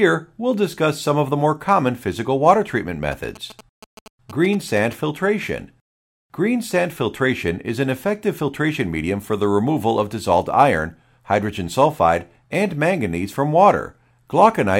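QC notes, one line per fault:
3.12–4.93 s, GSM signalling bursts: right after "common physical water treatment" you get that galloping dit-dit-dit of short buzzes, sitting roughly 20 dB under the speech. The buzz repeats at about 217 Hz, which points to a 2G phone close by doing its signalling chatter. The audio circuit rectifies those radio bursts and turns them into audible clicks and buzz, and it stops once the phone goes quiet.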